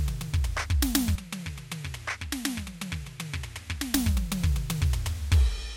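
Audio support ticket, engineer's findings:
Input switched to a poorer device, 1.15–3.94 s. Music turns dull, nothing above 12.7 kHz, level drops about 10 dB, faint new noise floor well below signal. No gap at either switch. Likely capture path moved to a narrower-band microphone, then back.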